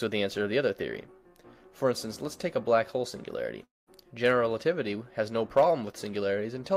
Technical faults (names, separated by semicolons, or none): long network dropout